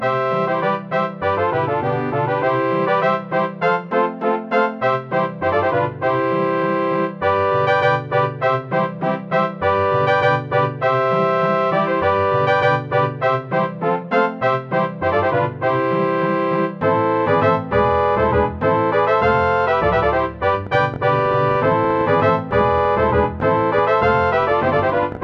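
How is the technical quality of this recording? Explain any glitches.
The recording has one clear glitch near the end. Train of clicks, 20.67 to 25.18 s: about fifty similar pulses at roughly 11.6 per second, irregularly spaced, likely from nearby interference or a faulty connection, popping about 5 dB above the sound, pauses included.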